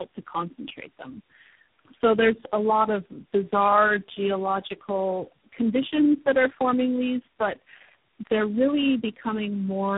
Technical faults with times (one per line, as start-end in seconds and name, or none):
0.00-9.98 tandem speech coding